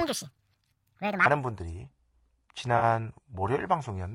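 A speech recording in which the opening runs high and hurried: from 0.00 to 1.26 s everything is sped up about 1.73 times and lifted by roughly ten semitones, pitch and tempo shifting together. This is likely a section at the wrong speed, played against the wrong clock before normal pace resumes. Across the whole clip the voice is rough and grainy, with noise filling the gaps between harmonics and a thin, synthetic-sounding top band. This is plainly audible low-delay AAC compression, with short-frame coding struggling to resolve the voice's harmonics, which fits AAC-ELD at around 32 kbps. At 2.77 to 2.84 s a brief smeared, phasey patch of about 40 ms interrupts the sound. This is AAC frame loss with concealment, the decoder rebuilding the gap from the last good spectrum, which points to two lost frames.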